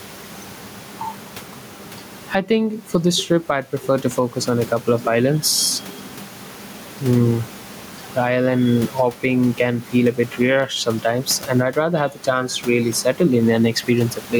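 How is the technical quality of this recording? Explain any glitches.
The recording has one fault, gain pumping, which runs through the whole clip.

Gain pumping is heard from start to end, with a gain swing of roughly 15 dB. The likely cause is input gain set far too high, with a fast limiter or compressor clamping every loud syllable and releasing in the gaps. The speech sounds squashed, and the room noise sits about 32 dB below the speech.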